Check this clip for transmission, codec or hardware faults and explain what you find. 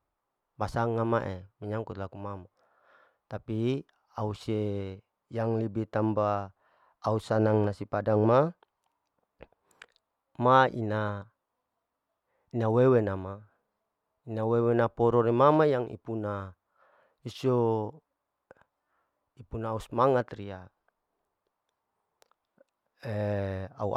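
Nothing here points to a transmission, codec or hardware problem; the speech comes across steady and intact the whole way, with nothing to flag.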